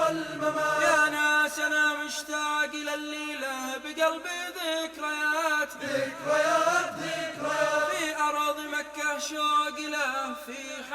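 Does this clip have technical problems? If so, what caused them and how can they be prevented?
No, this clip has no technical problems, so there is nothing to prevent.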